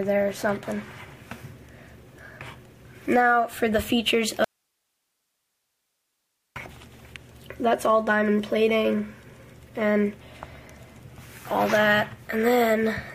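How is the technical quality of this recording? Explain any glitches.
The recording has one audio dropout to a faint residue. From 4.44 to 6.56 s the sound cuts out abruptly for about 2.1 s, leaving only hiss roughly 55 dB down. The likely cause is a lost signal with a still-live path, and the sharp edges and steady hiss distinguish it from a pause or fade.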